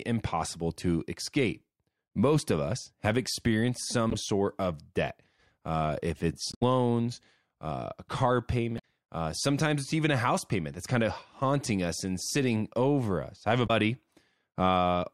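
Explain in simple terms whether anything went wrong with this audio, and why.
Parts of the compressed speech file were corrupted, which is called damaged data in a compressed stream. At those points the decoder received bytes it couldn't make sense of, lost its place, and had to hunt for the next readable chunk. You hear this as short, odd chirps or blips cutting into the speech at 4.10 to 4.14 s, 6.49 to 6.63 s, 8.75 to 8.84 s and 13.64 to 13.70 s, each lasting only a fraction of a second.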